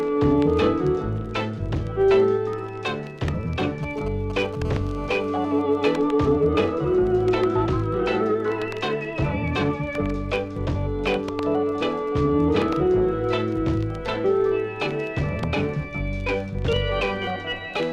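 From 3.59 to 4.55 s, a galloping dit-dit-dit of brief 217 Hz buzzes, roughly 10 dB below the sound: GSM signalling bursts, a nearby 2G phone's radio pulses rectified by the audio circuit.

From 4.65 to 5.62 s, a steady, raspy 217 Hz buzz rich in harmonics, about 19 dB down: GSM phone buzz, as the phone transmits in bursts 217 times a second during a call.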